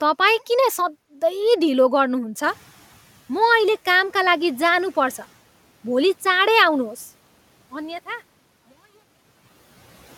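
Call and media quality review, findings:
Noise suppressor catching up, 2.43–3.11 s: room noise jumps by about 14 dB near 2.5 s and passes through under-suppressed, then sinks by about 8 dB over 680 ms as the suppressor's noise estimate adapts. Spectrogram shows the broadband floor brightening abruptly, then dimming gradually.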